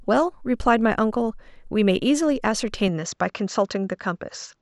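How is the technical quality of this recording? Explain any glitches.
The recording has one clear fault. From 2.88 s to the end, the input likely switched to a poorer device. The band stops near 7.7 kHz, so the speech turns duller, with no gap, similar level, and a faint new noise floor.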